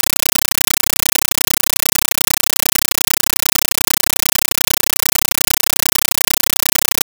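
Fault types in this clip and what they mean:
Compressed stream played as audio (throughout): an undecoded Dolby Digital bitstream is treated as ordinary samples, so each frame becomes a 9.33 ms burst of loud noise followed by silence, repeating 31.25 times a second as harsh chattering static, consistent with 448 kbps AC-3.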